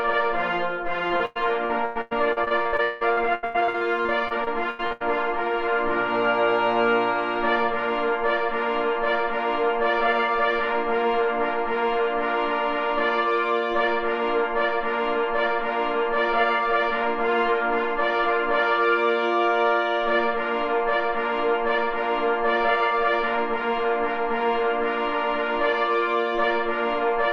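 The audio breaks up between 1.07 and 5.02 s with repeated packet loss (robotic sound). Over those four seconds the stream keeps dropping out in quick succession, with a couple of dozen short holes, the longest around 184 ms. Each hole gets patched by stretching out the last bit of sound, so roughly a third of that stretch is concealment rather than real signal. That's what gives it the choppy texture, with bits audibly missing.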